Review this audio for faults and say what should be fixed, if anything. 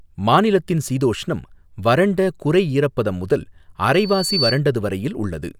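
A microphone picked up the loudspeaker it was feeding, and at 4.5 kHz the loop gain rose above one. The result is loudspeaker feedback squeal from 3.93 to 4.60 s, just after "வறண்ட குறை ஈரப்பதம் முதல்". A single piercing tone swells over roughly half a second and ends up a few decibels louder than the speech. Keeping the microphone out of the loudspeaker's coverage, lowering loudspeaker gain, or notching 4.5 kHz would prevent it.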